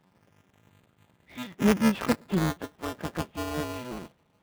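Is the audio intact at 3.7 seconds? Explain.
No. At 3.7 seconds, as throughout the clip, the speech sounds robotic and buzzy. This is the Codec 2 vocoder at 3.2 kbit/s. It discards the waveform, sends only pitch, voicing, energy and a spectral envelope, and rebuilds the voice from sine waves. The damage here is heavy.

A steady 375 Hz rattle also rides on the speech wherever there is signal. That is buffer tearing, and the rate fits a 128-sample buffer. The writer and the reader of the ring buffer have slipped, so a small slice of each buffer repeats audio from a few milliseconds earlier, with hard joins on both sides.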